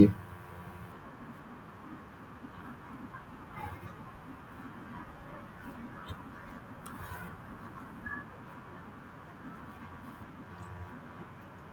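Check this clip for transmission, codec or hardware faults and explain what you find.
No transmission, codec or hardware faults turn up in this clip.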